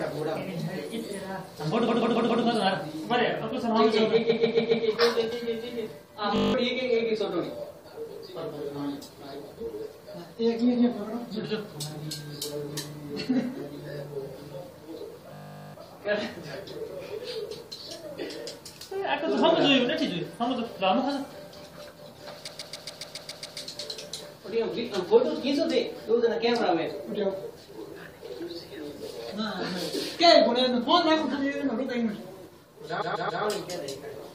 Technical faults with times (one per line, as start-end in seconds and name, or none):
1.87-2.43 repeated frames
4.28-4.84 repeated frames
6.36-6.54 system hang loop
15.34-15.74 system hang loop
22.47-23.58 repeated frames
33.01-33.43 repeated frames